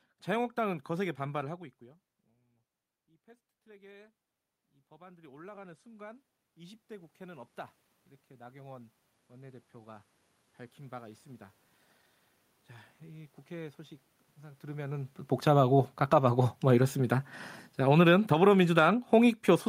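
From 1.33 s to 11.54 s, automatic gain rising: after the voice drops by about 24 dB around 1.5 s, the gain control slowly lifts its gain by about 20 dB. Unlike a talker simply moving closer, the room noise swells along with the voice.

From 15.32 s to the end, automatic gain falling: following the level jump near 14.5 s, the gain control pulls the level down gradually, so voice and background sink together. Within it, from 18.39 s to 19.24 s, a brief automatic gain rising of about 4 dB lifts both again.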